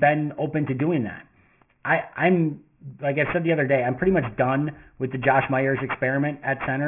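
Throughout the clip, sibilants turn gritty and metallic, with harsh, wrong-pitched tones crowding up to a sharp band edge near 3 kHz, about 15 dB below the speech. This is aliasing: the fold point fits a drop to a 6 kHz rate without filtering first, so content above 3 kHz mirrored back down.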